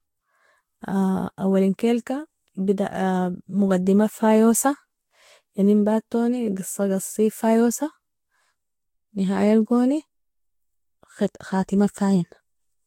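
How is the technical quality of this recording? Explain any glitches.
The recording is audibly degraded throughout by one fault. Generation loss runs the whole length of the speech: the sound is swirly, smeared and hollow, attacks are blurred, and nothing reaches above 16.6 kHz. The likely cause is lossy encoding repeated about four times, with each pass requantising on a shifted frame grid so that noise and spectral holes accumulate. The character points to Vorbis at around 60 kbit/s.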